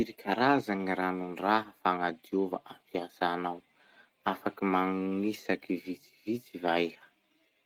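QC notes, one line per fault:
Nothing stood out on listening to the speech in this clip.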